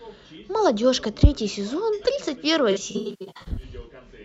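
Speech with AAC frame loss and concealment between 2.71 and 3.62 s. Just over half a second of audio is missing in scattered gaps, the longest around a tenth of a second. The decoder rebuilds each gap from the last good spectrum, leaving smeared, noisy, phasey patches.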